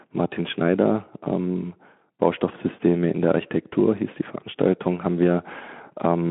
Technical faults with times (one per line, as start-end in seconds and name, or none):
none